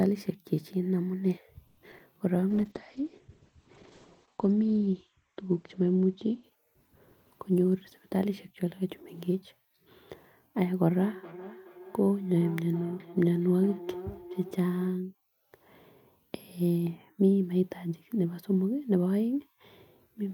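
Right at the start, from 1.67 to 1.79 s, the speech stalls for about 100 ms in what sounds like a call audio freeze. The last bit of sound is stretched into a short fading buzz, and then the speech picks up exactly where it left off, so nothing is lost. The whole thing just lands about 100 ms later. The likely cause is packets held up in transit long enough for the jitter buffer to run dry.

Right after that come two bits of short concealed packet loss, at 1.91 to 1.94 s and 1.98 to 2.01 s. Each time roughly 20 ms of real audio never made it to the decoder in time, and the receiver papered over the gap by continuing the previous sound before blending back in. You hear it as a quick smear or wobble, two of them in close succession.

From 2.50 s through to 9.22 s there's a call bitrate drop. The encoder goes from 64 kbps down to 9 kbps, presumably because the bandwidth estimate collapsed. 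At that rate Opus codes much more coarsely and pulls its audio bandwidth from 20 kHz down to 8 kHz, so the speech loses its top end and turns rough and watery. It sits at the lowest rate for about 2 s before climbing back.

Overlapping the tail of that, from 8.14 to 9.43 s, there's a jitter buffer speed-up. The buffer was holding more audio than it wanted, so the receiver trimmed out short pitch-period slices repeatedly, about 70 ms in total. Playback runs at about 105% speed with the pitch unchanged, so the speech sounds a touch rushed rather than higher.

Last, between 10.91 and 15.00 s, there's feedback echo between two devices. A second device on the same call is playing what the first device's microphone sent into the room, and that microphone picks it up again. Its echo canceller only knows about its own playback, so it doesn't remove it. Each phrase comes back roughly every 0.4 s, thinner and more ringing each pass, peaking at about 15 dB below the direct speech.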